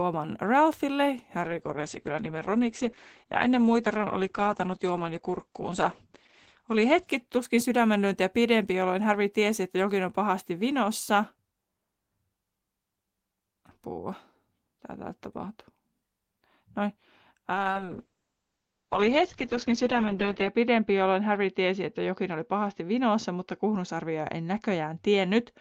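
From 1.43 s to 7.99 s there is a call bitrate drop: the encoder is starved of bits after the bandwidth estimate falls, so the audio is coded coarsely and the top end collapses from about 20 kHz to 8 kHz, which fits a fall from roughly 32 to 10 kbps. The speech turns muffled and rough, bottoming out for about 5 s. A second drop starts at 17.55 s, points to about 8 kbps, sits at its worst for about 2.9 s, and runs to the end of the clip.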